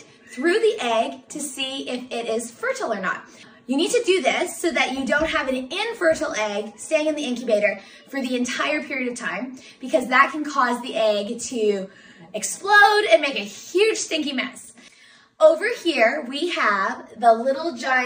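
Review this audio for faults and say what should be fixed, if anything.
Nothing stood out on listening, so there is nothing here that needs fixing.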